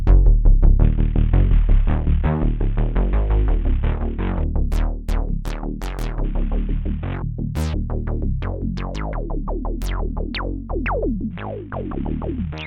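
From 0.83 to 4.44 s, 6.24 to 7.16 s, and 11.31 s to the end, the audio shows a Bluetooth SBC bit pool drop. In each stretch the treble dulls and a gritty quantisation noise rises, which fits the sender cutting the SBC bit pool from 28 to about 5, near 54 kbps, on a congested link. Upper sub-bands lose their bits and the remaining bands are coarsely quantised until the rate recovers.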